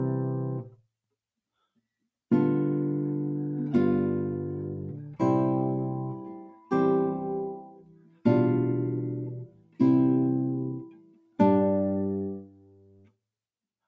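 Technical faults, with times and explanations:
Throughout, noise suppressor applied to music or sounds: a suppressor built for speech treats steady tones and decaying tails as noise. Gain swings by around 20 dB, so the sound pumps and thins. The waveform envelope sags between attacks, and the spectrogram shows sustained bands fading in patches.
6.21–6.72 s, 7.55–8.26 s, 9.36–9.8 s, 10.77–11.39 s, 12.35–13.17 s, sound cut by the noise suppressor: held or fading material here is pulled down by about 14 dB in the first span and about 18 dB in the others, so tails end early. Each span shows as a waveform trough and a darkened spectrogram patch, with the darkening ending at the next onset.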